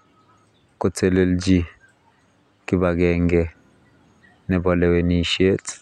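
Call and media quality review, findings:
Nothing stood out on listening to the speech in this clip.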